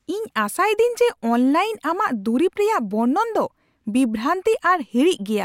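No technical faults can be heard anywhere in this speech recording, and the signal remains steady and intact throughout.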